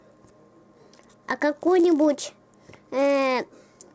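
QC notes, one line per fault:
Throughout: resampler restarted on every block. A buzz at 100 Hz rides on the sound and vanishes in silences. Each 10 ms block was rate-converted in isolation, which fits a 24 kHz to 16 kHz conversion, so the filter lacked true neighbouring samples at every block edge and left a small error there. On a waveform, tiny discontinuities recur every 10 ms. A spectrogram shows thin vertical striations at that spacing, with harmonics 100 Hz apart only where signal is present.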